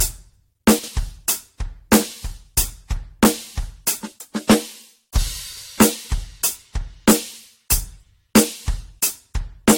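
The whole music clip has a swirly, hollow, smeared quality and nothing above 16.6 kHz, likely generation loss from roughly three passes through AAC-LC near 64 kbit/s.

At 0.79 to 0.88 s, and again at 5.53 to 5.62 s, there are chunks out of order: two 46 ms chunks swap places, giving a jumbled blip.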